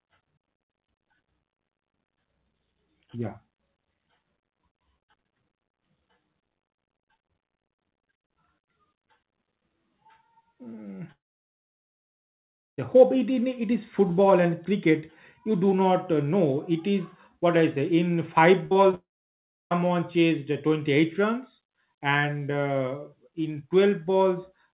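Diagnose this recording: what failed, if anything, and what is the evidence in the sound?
The network is the stage at fault here, most likely a long network dropout, twice: 11.12 to 12.80 s and 18.95 to 19.73 s. Each time the last sound trails off as a brief fading buzz or hiss, then goes silent for about 1.6 s and 0.67 s. Speech resumes further on, the second time at "chased uh", with the gap simply gone.

Just before that second hole there's a burst of packet loss from 18.66 to 18.73 s. About 60 ms never arrived, so the receiver stretched the previous sound into a short, dimming buzz or hiss and then jumped ahead, skipping the audio in between.

Two bits of short concealed packet loss land right in that cluster, at 18.73 to 18.77 s and 18.91 to 18.95 s, roughly 20 ms each. You hear them as quick smears or wobbles where the decoder bridged the hole and blended back in. All of this rides on band-limited audio with nothing above 4 kHz, which fits a G.711 mu-law call path.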